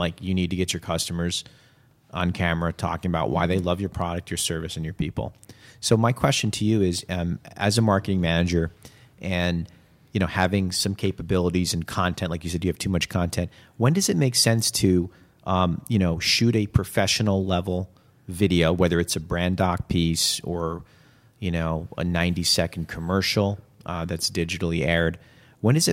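A brief crackle breaks through the speech from 10.39 to 10.45 s, just after "manager and you know" and before "some capabilities and content". This is hard clipping: the peaks exceeded what the signal chain could pass by about 2 dB and were sliced flat, adding harsh upper harmonics.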